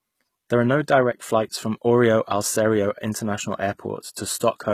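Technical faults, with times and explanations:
Throughout, HE-AAC compression: plainly audible coding damage. The treble is synthesised rather than carried, so its harmonics misalign and s sounds turn gritty and metallic, with nothing above 14.9 kHz. The likely cause is HE-AAC v2 band replication, fitting roughly 20 kbps.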